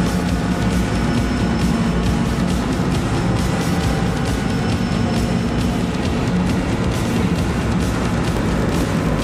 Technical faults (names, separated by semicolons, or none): block size mismatch (padded)